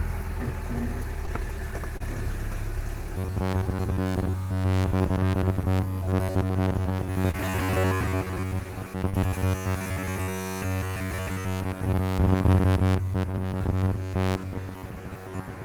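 This everyday-sound recording has two faults. Short concealed packet loss occurs seven times, at 1.25–1.29, 1.97–2.02, 4.04–4.07, 7.31–7.35, 9.09–9.15, 10.23–10.29 and 13.31–13.35 s. Each time, 20 to 40 ms of audio arrived too late to decode, and the receiver bridged the gap by extending the preceding sound before blending back, which leaves a brief smear or wobble. Robotic sound from repeated short buffers runs from 3.18 s to the end as a rigid metallic buzz at 93.8 Hz. The likely cause is playback starved of fresh audio, repeating a segment of roughly 10.7 ms over most of that stretch and skipping the real material. The fixed loop length imposes the buzz's pitch.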